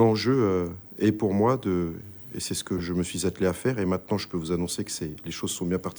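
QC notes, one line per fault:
2.78 to 2.80 s, corrupt frame decoded: a short blip of misplaced energy peaks around -20 dBFS. Damaged bits in what sounds like a single compressed frame were decoded anyway. Wrong gains and misread codes spread sound into the wrong frequencies for that frame's length.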